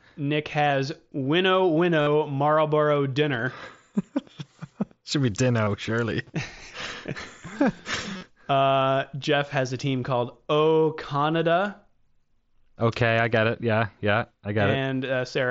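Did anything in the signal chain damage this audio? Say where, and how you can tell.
Yes, on the Bluetooth link between headset and phone: concealed Bluetooth headset packet loss at 0.65–0.70 s (30 ms lost, scattered over 60 ms), 2.01–2.07 s (52.5 ms), 5.65–5.67 s (22.5 ms) and 8.13–8.23 s (67.5 ms over 90 ms, longest run 45 ms). Lost voice packets were filled by repeating the best-matching recent stretch of waveform, giving a buzzy held tone. On a waveform, these spots show identical repeated cycles at constant level. On a spectrogram, they show frozen horizontal harmonic stripes, all within the 8 kHz band of the mSBC codec.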